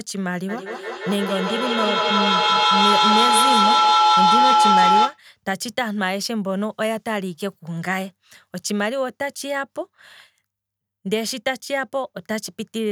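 Feedback howl runs from 0.49 to 5.23 s: the speech is looping from loudspeaker back into a microphone, gaining level on each pass until it locks onto a ringing tone around 1 kHz. The loop repeats roughly every 150 ms, and the tone peaks about 7 dB above the speech.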